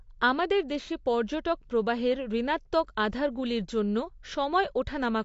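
From start to finish the speech sounds dull and smeared, with nothing above about 7.6 kHz, so sibilants lose their crispness and take on a fizzy, warbling edge that is plainly audible. This is AAC compression, likely AAC-LC at a low bitrate, around 32 kbps. With so few bits available, the encoder lowered its cut-off and coarsely quantised the remaining frequency lines against its hearing model, leaving gaps and smearing in the spectrum.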